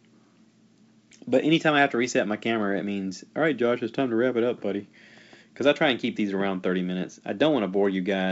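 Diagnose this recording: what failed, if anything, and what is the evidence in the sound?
Nothing failed: the speech runs through G.722 wideband telephone coding at 64 kbit/s, with any coding trace faint at most and nothing in the sound pointing to a fault at any stage.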